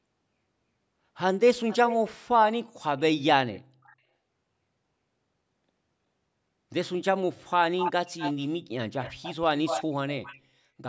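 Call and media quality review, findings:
Echo leak: delayed repeat of the speech at 1.68–2.1, 2.83–3.0, 3.53–3.96 s (about 360 ms lag, quiet), then 7.78–8.49, 9.01–9.35, 9.66–9.85, 10.24–10.38 s (about 240 ms lag, 5 to 20 dB below speech). Likely far-end loudspeaker echo canceller residue. Discrete copy at a fixed lag, unlike diffuse room reverb.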